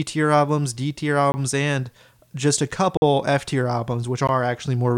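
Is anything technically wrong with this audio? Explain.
Yes. Three blocks of digital silence interrupt the speech. Each time, the output buffer was likely not filled in time and zeros were written instead. The sound drops abruptly to nothing and returns with no fade. The first gap runs from 1.32 to 1.34 s, just before "and just a". The second runs from 2.97 to 3.02 s, right after "and just a". At about 48 ms it is long enough to be heard as a short hole. The third, at 4.27 s, lasts about 16 ms.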